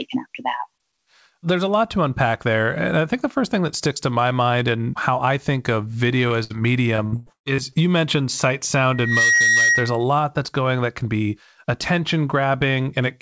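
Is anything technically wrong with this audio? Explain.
Yes, there are four problems, three of them packet loss bunched between about 6.3 and 7.7 s, plus a feedback squeal later on.

Right after "how I think of", from 6.28 to 6.32 s, there's a short concealed packet loss. About 20 ms never arrived in time, so the receiver stretched the last bit of sound over the gap and blended back, leaving a quick smear or wobble.

A burst of packet loss follows at 6.44 to 6.52 s. Roughly 60 ms went missing in one go, and the decoder held the previous sound while fading it, so you get a brief buzz or hiss before the audio picks up further along.

From 6.96 to 7.74 s, just before "you mentioned sight", repeated packet loss gives a robotic sound. Six separate gaps, the longest about 134 ms, each patched by continuing the last sound, with nearly half that stretch made up. It comes out choppy.

Then there's a loudspeaker feedback squeal from 8.91 to 10.04 s, between "you mentioned sight" and "that's going that can". 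A microphone is picking up its own loudspeaker, and at 1.9 kHz the loop gain runs past one. The tone swells over about a third of a second and peaks at about 5 dB above the speech.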